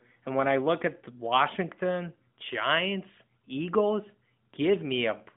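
No faults are audible; the speech carries the band-limited sound of an AMR narrowband mobile path, with nothing above 3.6 kHz.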